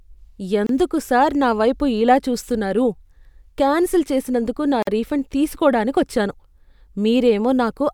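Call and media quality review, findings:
Gap at a join of encoded pieces, 0.67 to 0.69 s (27 ms) and 4.83 to 4.87 s (48 ms). Silence inside continuous speech, edges smeared. Encoder start delay and last-frame padding left untrimmed at segment joins. Unlike packet loss, speech resumes exactly where it stopped, nothing missing.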